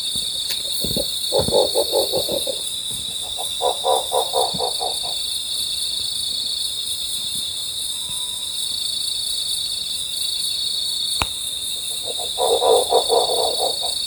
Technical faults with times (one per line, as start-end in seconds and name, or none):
9.66-9.90 chunks out of order